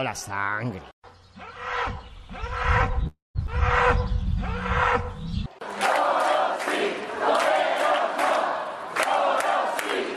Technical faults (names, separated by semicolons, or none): call audio freeze; skip ahead